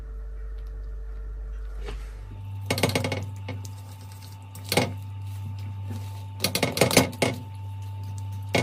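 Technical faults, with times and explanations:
Nothing stood out on listening to this recording.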